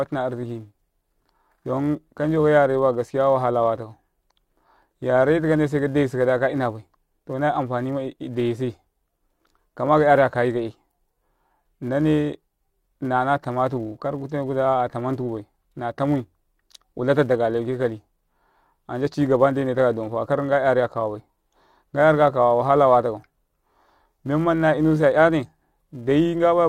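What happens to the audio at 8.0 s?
At 8.0 s the speech carries a steady buzz at 375 Hz, a rapid train of small ticks whose strength rises and falls with the loudness of the talking. It isn't a one-off event but is present throughout the clip. This is a filter restarted on every block: the filter drops its memory at each block boundary and starts again from silence, leaving a small transient every time, which fits a 128-sample block.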